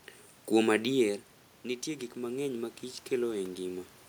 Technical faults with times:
1.02-3.88 automatic gain rising

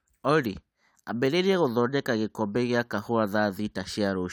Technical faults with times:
none

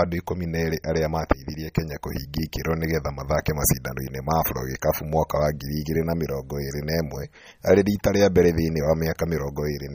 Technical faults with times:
0.00-9.94 MP3 compression

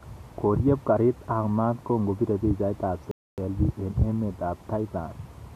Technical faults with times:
3.11-3.38 rebuffering stall

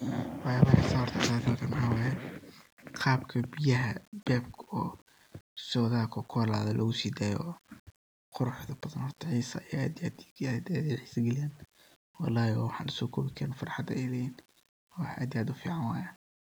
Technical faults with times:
0.00-16.54 low bit depth without dither

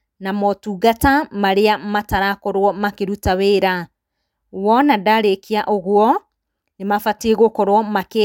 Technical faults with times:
none

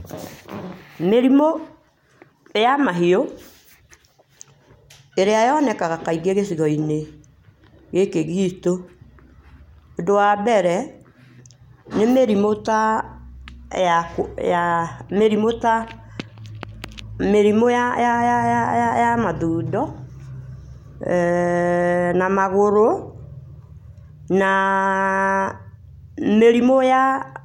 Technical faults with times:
none

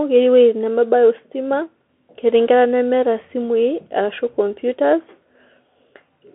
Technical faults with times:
0.00-6.35 Bluetooth CVSD headset codec

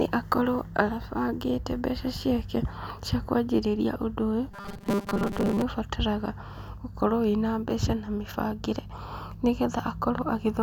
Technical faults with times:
4.52-5.62 robotic sound from repeated short buffers

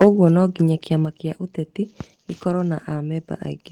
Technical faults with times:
0.01-0.25 microphone overload
0.04 microphone volume stepped down
1.05 microphone volume stepped down

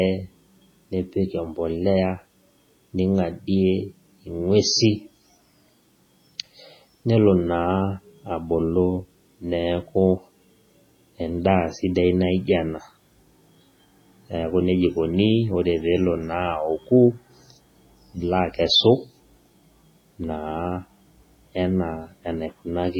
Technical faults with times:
0.00-22.99 MP3 compression

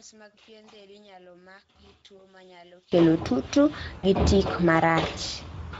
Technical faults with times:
0.00-5.79 Speex codec
0.00-2.92 one channel inverted
2.17-2.25 VoIP packet loss concealed by the speech codec
3.99-4.06 VoIP packet loss concealed by the speech codec

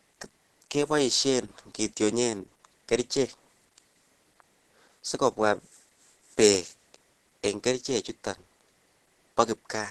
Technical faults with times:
0.00-9.90 Opus compression

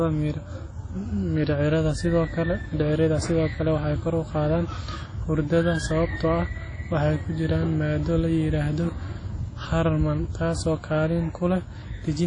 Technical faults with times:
0.00-12.26 WMA compression

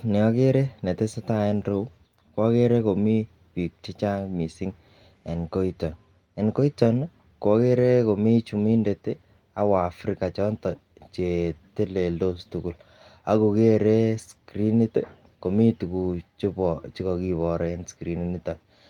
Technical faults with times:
none

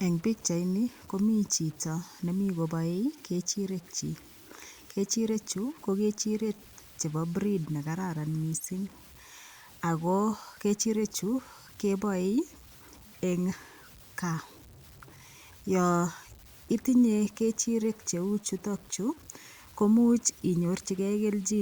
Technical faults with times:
0.00-21.61 low bit depth without dither

